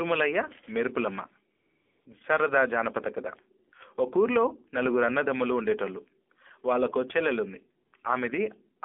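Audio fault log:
Throughout: AMR narrowband mobile codec. Muffled, buzzy, synthetic speech confined to roughly 250 Hz to 3.6 kHz, which fits a low 7.4 kbps mobile codec rebuilding the voice from a coarse vocal-tract model.
1.56–2.06 s, 3.68–3.72 s, 7.86–7.92 s: AMR comfort noise. Smooth, even hiss switching in for 500, 40 and 60 ms, because speech frames stopped and the receiver filled the gaps with synthetic noise.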